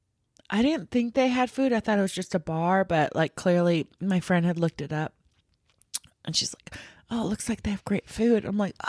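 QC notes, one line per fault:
No faults heard in this speech clip.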